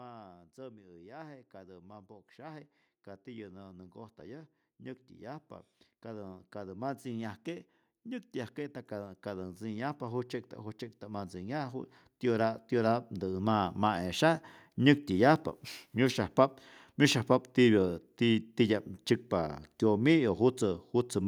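The automatic gain control judged the input too quiet and kept turning itself up, so the speech and the background noise beneath it swell together rather than the voice alone getting louder. This automatic gain rising first happens from 0.55 to 2.73 s, a gentle lift of about 5 dB. It returns from 6.02 to 14.49 s as a much longer climb of about 16 dB, where the background rises along with the speech.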